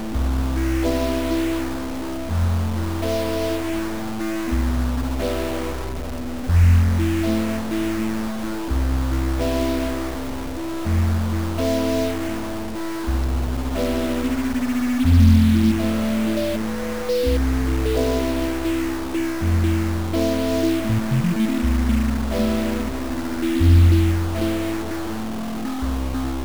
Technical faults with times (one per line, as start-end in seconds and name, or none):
0.00-26.44 stuck bit